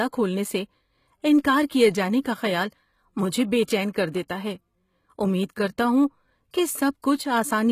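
Throughout the speech, the treble sounds synthetic and gritty, with s sounds turning metallic and nothing above 14.9 kHz. This is most likely HE-AAC compression at a low bitrate, around 20 kbps, rebuilding the upper band from copied lower bands rather than coding it directly.

At 3.64 to 3.68 s, then at 4.12 s and 4.28 s, pre-echo appears: a brief hiss leads each sharp onset by 15 to 36 ms, because quantisation noise spread across the transform block reaches back before the attack, blunting it.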